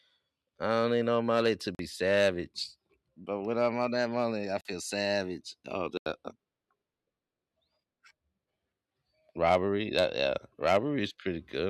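At 1.75 s, after "need no money to", the speech drops into a block of digital silence for about 43 ms. It recurs at 4.61 s, after "on that money I", and at 5.97 s for 85 ms. Each cut and return is abrupt, with no fade. The lengths fit a 2048-sample output buffer going unfilled.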